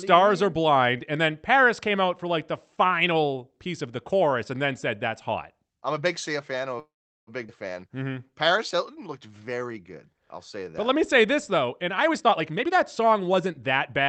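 Right after "fan I'm a", at 6.79 s, the speech stops and a call audio freeze holds until 7.30 s. The likely cause is packets stalling in transit and the jitter buffer running dry. The receiver extends the last sound as a brief fading buzz, then about 0.39 s of silence. The speech resumes where it left off. On a spectrogram, a short smeared tail gives way to an empty vertical band about 0.4 s wide. The waveform flattens to near zero across that band.

Just after "fan I'm a big", at 7.47 to 7.52 s, there is a skip ahead. Roughly 0.3 s of speech was discarded because later audio was already queued, and the two sides are joined with only a filler of about 15 ms. It sounds like an abrupt lurch forward, with part of the phrase simply gone. A spectrogram shows the harmonic pattern changing at a hard vertical seam with almost no gap. The waveform shows a sudden change of envelope at that point.

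From 7.90 s to 11.67 s, a jitter buffer slow-down stretches the speech to about 94% speed. The buffer was low or had raised its target delay, so it repeated single pitch periods and pause fragments over and over, adding about 245 ms in total. The pitch stays the same, but vowels drag. On a spectrogram the harmonics stay level while syllables look horizontally stretched. The waveform shows identical cycles repeated back to back.

From 11.97 s to 13.91 s, a jitter buffer speed-up pushes the speech to about 119% speed. This happens after the buffer has overfilled, and the receiver snips out pitch periods repeatedly to shed roughly 0.4 s. The result sounds hurried and clipped, yet the pitch is unchanged. A spectrogram shows compressed syllables with harmonics still level. The waveform shows small discontinuities where cycles were removed.

Across all of this, the Opus call path caps the audio at 8 kHz, which appears as a flat ceiling on the spectrogram. 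Its coding texture fits a bitrate of about 32 kbps.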